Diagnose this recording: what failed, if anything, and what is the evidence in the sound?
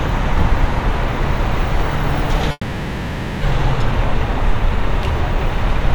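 From 2.51 to 3.43 s the sound gives way to a fading buzzy continuation of the last moment, then a brief silence of about 30 ms, and resumes with roughly 0.9 s gone. This is likely a long network dropout: the receiver filled the missing packets by extending old audio.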